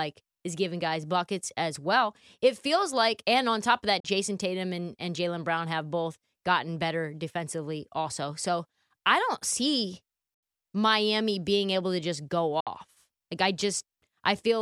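The speech cuts to silence at 4.00 s after "on top of that" for about 41 ms, at 10.34 s after "I don't see" for about 81 ms, and at 12.60 s after "able to just go" for about 61 ms, each likely a Bluetooth dropout. Each shows as a sharp-edged blank column across the spectrogram, and speech resumes further on as if it had kept playing.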